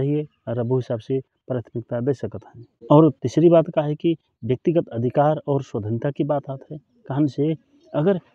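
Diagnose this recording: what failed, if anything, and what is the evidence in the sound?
Nothing failed: no stage from the analogue wiring through to playback leaves a mark on this speech recording. The sound holds no evidence pointing to any fault, so there is no mechanism to trace.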